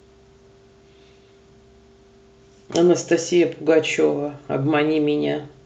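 No faults detected in the speech; the call-codec path carries it normally, with the top end limited to about 8 kHz.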